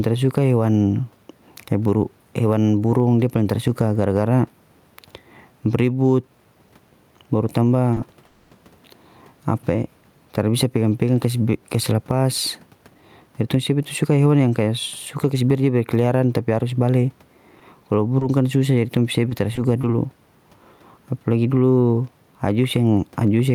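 Right from the start there's gain pumping, likely from gain set too high with a fast limiter clamping down. The room noise, about 43 dB under the speech, swells in the pauses and ducks by around 5 dB whenever the speech gets loud. At 7.93 to 7.98 s there's a short stall from a late packet: the last sound gets stretched about 30 ms until the packet shows up, so you hear a brief held buzz with nothing lost. Just after, from 8.25 to 8.53 s, comes a call audio freeze, likely packets held up in transit. The sound drones on as a fading buzz for 260 ms, then picks up exactly where it left off. Between 12.71 and 15.49 s the jitter buffer speed-up kicks in, trimming tiny pitch-period slices, about a fifth of a second in all, so the speech runs roughly 8% faster at unchanged pitch and sounds a bit rushed. Then there's repeated packet loss with a robotic sound in two patches, 17.59 to 18.23 s and 19.29 to 19.85 s. 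Each has three quick holes of up to 20 ms that get patched over, giving choppy bits with small pieces missing.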